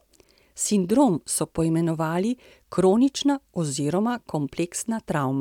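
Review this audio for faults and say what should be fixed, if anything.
No faults turn up in this audio, so nothing needs to be fixed.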